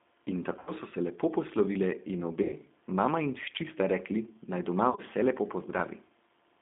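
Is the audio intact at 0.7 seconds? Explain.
No. At 0.7 s the sound sits at the tail of VoIP packet loss concealed by the speech codec, running from 0.59 to 0.71 s. About 80 ms of audio went missing, which fits eight lost 10 ms frames. The decoder filled the gap by repeating its last pitch and filter with falling gain. That gives a buzzy tone or coloured noise that fades, instead of real sound.

The G.729 codec also affects this moment, as it does the whole clip. The sound points to an 8 kbit/s G.729A stream. It rebuilds speech from a filter, a pitch predictor and a few pulses per frame. Only about 200 Hz to 3.6 kHz passes, and the result is plainly rough and synthetic.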